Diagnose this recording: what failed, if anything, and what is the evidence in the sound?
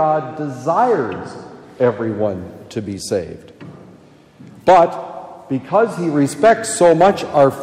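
Hard clipping is what's going on here, at a converter or sample-format stage that can't pass the full level. There are brief bits of crackle at 1.84 to 1.88 s and 5.75 to 5.79 s, where peaks only just go over, by about 1 dB. It gets harsher at 4.68 to 4.83 s, about 7 dB over, and there's a sustained fuzz from 6.44 to 7.45 s at about 5 dB. Those flattened tops are throwing off high harmonics.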